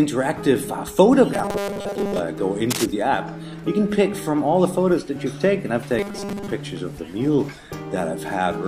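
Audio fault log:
1.34–2.19 s and 5.99–6.52 s: robotic sound from repeated short buffers. New audio likely arrived too seldom, so the playback repeated a very short buffer, about 5 ms long, over most of each stretch. This imposes a fixed 200 Hz metallic buzz that roughly tracks the underlying sound.
2.70–2.86 s: cable scratch noise. A worn cable, connector or control was likely moved, making its contact resistance fluctuate rapidly. The result is a brief burst of dense, uneven scratching laid over the sound, only about 5 dB below it.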